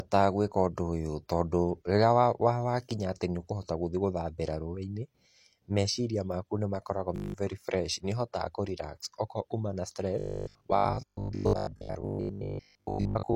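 From 7.16 to 7.34 s, between "meciria maku nĩ makoragwo" and "very fresh nĩ ũhotaga", a system hang loop repeats one 20 ms piece nine times, a steady 50 Hz buzz replacing about 200 ms of speech.

From 10.19 to 13.35 s, after "kuma na", the speech turns robotic with a 50 Hz buzz. It still roughly tracks the speech, unlike a frozen loop, and is likely caused by repeated short buffers covering most of the audio.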